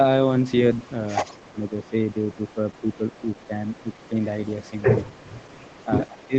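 From 0.42 to 0.93 s, and again from 1.24 s to the end at 6.4 s, a faint delayed copy of the speech trails the original by 179 ms, roughly 30 dB below it. This is an echo leak, likely from a far-end loudspeaker whose echo canceller let part of the microphone pickup through and sent it back. On a spectrogram it appears as a weak ghost of each syllable's harmonics, shifted right by about 0.18 s. On the waveform it is a low-level tail after each burst.

Between 1.34 and 4.15 s the speech level dips and thins in pieces, totalling about a second and dropping by up to about 15 dB. A brief dip follows at 5.03 to 5.16 s, also about 15 dB. A deeper one of about 20 dB spans 5.85 to 6.35 s. This is speech suppressed in double talk. The echo canceller was likely unable to tell this talker from the returning echo while both sides were active, so it attenuated both. The waveform shows sudden notches in the envelope. 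The spectrogram shows the upper harmonics fading, within a band that already ends at 8 kHz from the call path.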